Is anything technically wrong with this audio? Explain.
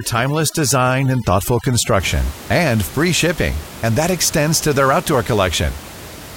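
Yes. Overdone noise removal affects the first 2 seconds, from 0.0 to 2.0 s. A noise reducer set too strongly pushes individual frequency bands down or off whenever they sit near its noise estimate, taking quieter parts of the speech with them, so the background drops away into twinkling, warbling specks. The room noise, about 17 dB below the speech, is part of the recording rather than a fault.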